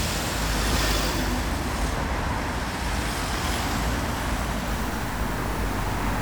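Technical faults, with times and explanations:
4.68 to 6.21 s, low bit depth without dither: the sound turns grainy and gritty, with distortion that moves with the signal and quiet parts sputtering or dropping out, about 20 dB below the signal. Likely cause is truncation to roughly 5 bits with no dither, so the rounding error tracks the waveform.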